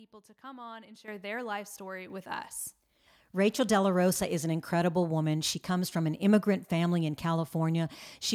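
At 1.08 s the whole signal, voice and background together, jumps abruptly louder by about 10 dB, then rises again by about 5 dB at 2.1 s. These are microphone volume stepped up events: the call software judged the input too quiet and raised the device's gain in single steps.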